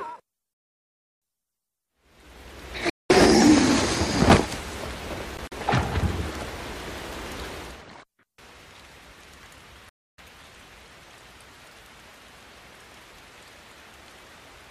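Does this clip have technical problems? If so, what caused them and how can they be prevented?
Yes. Sharp-edged silent gaps at 0.53–1.22 s, 2.90–3.10 s and 9.89–10.18 s, plus scattered short holes at 5.37–5.52 s, are likely Bluetooth dropout: late packets were discarded and the sound resumed as if it had played on. The waveform shows flat holes, and the spectrogram shows blank vertical bands. Keeping the source near the headphones and away from wireless interference prevents this.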